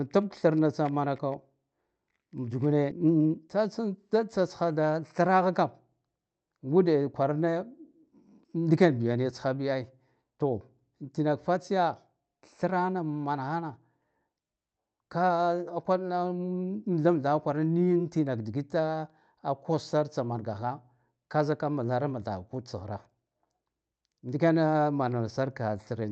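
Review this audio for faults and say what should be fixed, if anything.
A skip ahead occurs at 2.91 to 2.93 s. Roughly a second of speech is dropped outright, with no fill, and the audio on either side is spliced almost directly together, so playback lurches forward rather than pausing. This fits a jitter buffer that overflowed while later packets were already queued and discarded the backlog to catch up. To prevent it, size the jitter buffer and its overflow handling so a burst of late packets is absorbed instead of flushed.

A jitter buffer speed-up follows from 3.03 to 4.21 s. The speech runs at about 110% of normal rate with its pitch unchanged, sounding briefly hurried. The receiver is repeatedly removing short pitch-period-sized pieces, roughly 150 ms in total, to draw down excess buffered delay. The call codec's band limit, with content stopping around 8 kHz, runs throughout. To prevent it, smooth out the packet arrival timing upstream so the buffer does not swell and need compressing.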